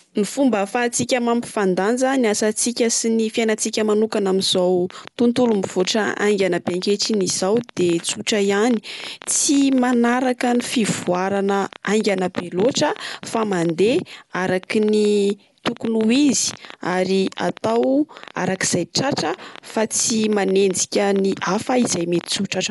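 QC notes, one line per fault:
Throughout: Dolby Digital compression, likely from a 64 kbps encode; nothing above 11.4 kHz, spectrogram cut flat there, dull sound with rough fluttering noise around tones.
4.55–22.33 s: train of clicks from just after "sy ny fiainantsika manokana", about ten per second at uneven spacing, some two hundred alike spikes roughly 5 dB above the signal, ticking through pauses; waveform shows repeated narrow spikes, spectrogram thin vertical lines.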